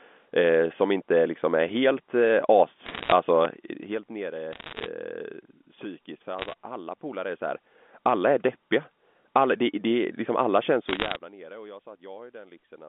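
Bursts of bit errors on a digital phone line break in at 2.86 to 3.12 s, just after "liksom är helt eh". Flipped bits in the A-law samples, at around one percent, produce sharp ticks and crackle over the unchanged speech. At 3.45 to 3.47 s, just before "helt nere", a single loud pop stands roughly 15 dB above the speech, likely a voltage step from a plug, switch or static discharge, while the speech continues underneath. The same crackle returns at 4.53 to 4.86 s, at 6.39 to 6.54 s, and at 10.88 to 11.16 s, between "alla känns" and "nere och jag".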